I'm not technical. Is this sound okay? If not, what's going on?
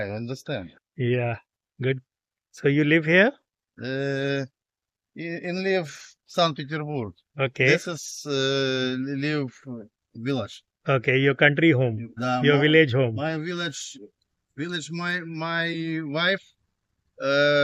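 Yes, nothing stood out as a problem when listening to this sound.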